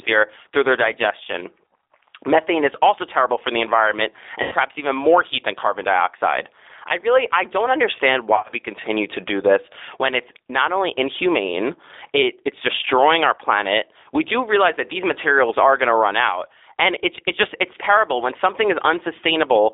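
Throughout the recording the speech carries G.729 codec damage, and the character of the distortion fits the 8 kbit/s G.729A variant. The band sits between about 300 Hz and 3.7 kHz, so sibilants lose their top end and the low voice body is thinned. Because the coder rebuilds each 10 ms frame from a vocal tract filter, a pitch predictor and a handful of pulses, the voice has a plainly audible rough, synthetic grain.

At 4.43 s the audio breaks up into VoIP packet loss concealed by the speech codec. About 90 ms of signal is missing, up to 4.55 s. The decoder fills the gap by repeating its last pitch and filter state at falling gain, so the sound is stretched out and fades. The same fault returns at 8.35 s, running to 8.54 s. This time 120 ms is lost in short runs scattered over about 180 ms, the longest only 30 ms. Because each frame is predicted from the one before, the voice stays weak and distorted briefly after packets resume.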